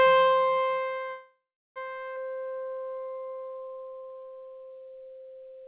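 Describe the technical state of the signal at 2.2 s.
A skip ahead falls at about 2.16 to 2.18 s. Roughly 0.3 s of the sound was dropped after later audio had already queued, and the two sides are butted together across a 7 ms fill. On a waveform it shows as an abrupt seam with a sudden change in envelope, and on a spectrogram as a sharp vertical discontinuity.

Right after, from 2.29 to 4.46 s, comes a jitter buffer slow-down. The receiver repeated single pitch periods to rebuild its reserve, adding 270 ms and running at 88% speed with unchanged pitch. The waveform shows stretched, repetitive cycles, and the spectrogram shows elongated events with a faintly regular banding.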